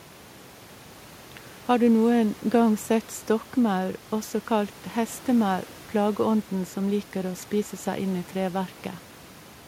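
No technical faults can be heard anywhere in the speech. Room noise sits in the background about 26 dB below the speech, picked up along with the voice at the microphone.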